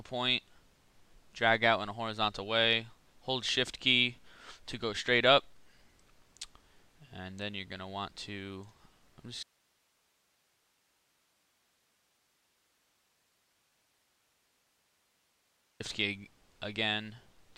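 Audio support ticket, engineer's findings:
Audio dropout to a faint residue, 9.43–15.8 s: sound cuts abruptly, leaving only hiss far below normal level for 6.4 s. Likely upstream signal loss with downstream path still live.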